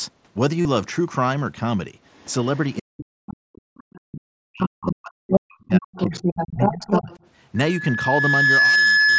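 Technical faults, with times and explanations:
0.62–0.65 s, concealed Bluetooth headset packet loss: a brief buzzy, steady tone replaces the speech, with a slight warble as the voice returns. A run of lost headset packets, about 37.5 ms, was filled by repeating the best-matching recent stretch of waveform.
2.12–2.77 s, 3.77–4.00 s, 4.61–4.92 s, 5.32–5.40 s and 5.73–7.18 s, other side's voice leaking through: a second voice appears behind the talker, faint in the first two stretches, then roughly as loud as the talker. This is likely far-end loudspeaker audio the echo canceller failed to remove.
2.79–6.15 s and 6.54–7.11 s, speech suppressed in double talk: the talker's voice dips and breaks up in pieces, falling by roughly 40 dB at worst in the first span and about 25 dB in the second. The likely cause is the echo canceller turning everything down while both sides spoke.
7.56–9.19 s, loudspeaker feedback squeal: a single 1.7 kHz tone swells over about a second into a squeal that ends up roughly 5 dB above the signal. 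The microphone is picking up its own loudspeaker, and at that frequency the loop gain exceeds one.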